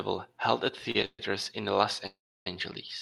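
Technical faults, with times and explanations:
0.91–0.96 s, short stall from a late packet: just after "held at", the sound is held 34 ms too long with a slight buzz or dip. A packet arrived late, the jitter buffer emptied, and playback resumed with nothing lost.
1.05–1.20 s and 2.07–2.47 s, call audio freeze: a fading buzz or hiss turns to silence. The first, again after "held at", fills 133 ms with 50 ms of silence. The second fills 395 ms with 310 ms of silence. The cause is likely packets held up in transit draining the jitter buffer. Audio then resumes where it stopped, with nothing missing.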